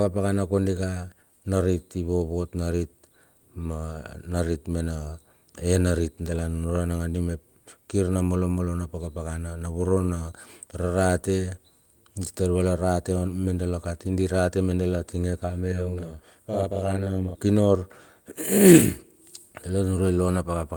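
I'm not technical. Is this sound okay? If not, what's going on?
No. From about 15.72 to 17.35 seconds the speech sounds doubled, with a quick second copy arriving just behind the first at the same loudness. This is a channel delay (doubling): one side arrives roughly 43 ms late, and both are then mixed together.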